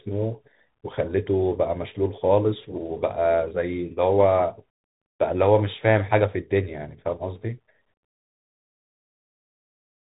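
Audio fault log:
Throughout: Bluetooth CVSD headset codec. The speech has been squeezed through the narrowband headset link, and the sound points to CVSD at 64 kbps, one bit per sample signalling only up or down while the step size adapts. Nothing above about 3.8 kHz survives, so the speech sounds boxed in. Loud high-frequency content outruns the step size and breaks up, s sounds come out scratchy, and a granular hiss sits beneath the speech throughout.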